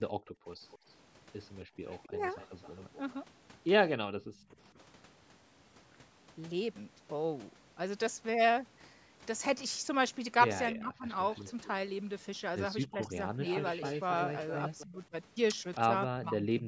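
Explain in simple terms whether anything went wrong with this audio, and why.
Several things went wrong, all tied to the call's echo control.

Speech suppressed in double talk: from 0.43 to 4.29 s and again from 10.73 s to the end, the speech dips or breaks up in short pieces, adding up to a fraction of a second and then about a second. This likely happened because both sides talked at once and the echo canceller turned everything down.

Echo leak: from 0.69 to 4.56 s and from 11.34 to 15.8 s, a delayed copy of the speech trails about a quarter second behind. It is faint at first and more noticeable later. This is likely loudspeaker sound that the far side's canceller failed to remove.

Background gated by the echo canceller: between 1.65 and 1.77 s, the room sound briefly drops out for about a tenth of a second while the canceller clamps the microphone, then returns.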